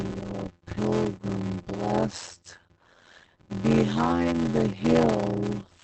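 From start to finish, a block size mismatch (padded) runs through the sound. Each block is only partly filled, and zeros make up the rest. This produces a steady buzz at 86.1 Hz, which fits a 512-sample read block. The speech plays at 0.625 times normal speed, yet its pitch stays about normal.

Opus voice compression is audible throughout as well. The damage is plainly heard. It sounds like SILK coding in wideband at about 12 kbps. Nothing survives above 8.5 kHz, so the speech is muffled. The coarse coding also leaves it hoarse and slightly robotic.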